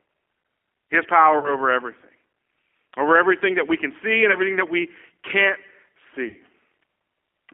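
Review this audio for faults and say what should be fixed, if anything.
Throughout, the speech sounds narrow, slightly rough and synthetic, with nothing below about 300 Hz or above 3.4 kHz. That points to the G.729 codec at around 8 kbit/s. It rebuilds each 10 ms frame from a vocal tract filter, a pitch predictor and a handful of pulses rather than the actual waveform. Carrying the call on a wideband codec such as Opus or G.722 would prevent this.

At 1.39–1.52 s, at 4.32–4.37 s just after "we can see and", and at 6.28–6.36 s, the speech smears into a buzzy tone or coloured noise that fades and then returns weak or distorted. This is VoIP packet loss concealed by the speech codec. For gaps of 40, 20 and 60 ms, the decoder extrapolated its last pitch and filter at falling gain. Because each frame builds on the previous one, the damage lingers past each gap. Better network prioritisation with forward error correction and an adequate jitter buffer would prevent these dropouts.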